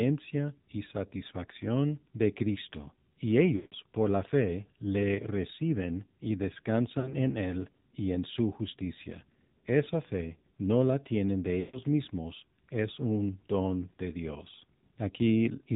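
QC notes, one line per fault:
Throughout: AMR narrowband mobile codec. Nothing above 4 kHz gets through, and the voice has a plainly buzzy, synthetic edge from the vocal tract model and sparse pulse excitation. That fits a low mode around 7.4 kbps.
3.56–3.74 s, 7.00–7.14 s, 11.60–11.79 s: lost AMR speech frames. The decoder keeps replaying the last good pitch and vocal tract settings with falling gain, so sound smears and fades over about 160 ms, 40 ms and 140 ms. Speech then returns weak or rough briefly.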